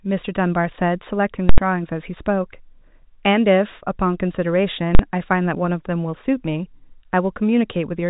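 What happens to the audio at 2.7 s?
Nothing goes wrong at 2.7 s: the speech carries straight through that moment intact, with only the narrow G.711 telephone band, topping out around 3.8 kHz, that is part of how it was carried.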